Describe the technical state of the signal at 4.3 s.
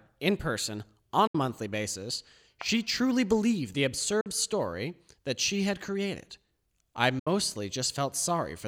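A Bluetooth dropout runs from 4.21 to 4.26 s: the speech cuts to about 46 ms of silence, likely from wireless packets arriving too late, then resumes further along.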